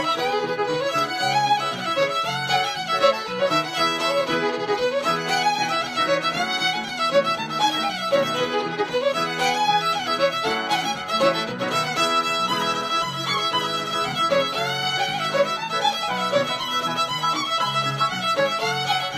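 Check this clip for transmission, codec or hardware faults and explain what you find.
Nothing stood out on listening; no fault of any kind could be heard anywhere in the clip.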